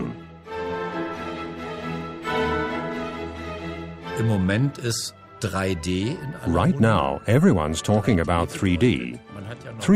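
No technical faults are audible anywhere in the clip.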